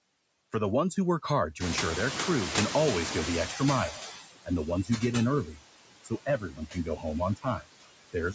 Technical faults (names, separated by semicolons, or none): noise suppressor artifacts; noise suppressor catching up; speech cut by the noise suppressor